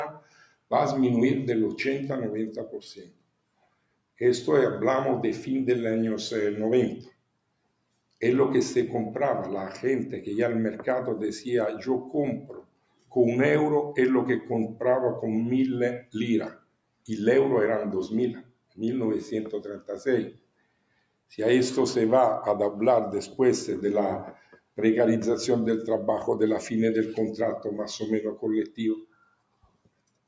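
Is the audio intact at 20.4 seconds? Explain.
No. At 20.4 s the noise suppressor is cutting this sound, within a stretch from 16.01 to 21.33 s, dipping by up to about 19 dB for roughly two seconds in total. Unlike a dropout, sudden onsets still get through while held and fading parts sink. Throughout the clip, the noise suppressor is also working on the music and other sounds, its level loss swinging by around 10 dB. This is not a fixed gain change, because it follows how steady the sound is.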